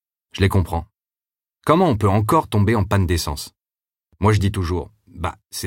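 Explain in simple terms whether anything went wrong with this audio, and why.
A sudden gain jump at 4.56 s makes everything, background included, abruptly quieter until the end, likely a volume change applied instantly rather than faded in.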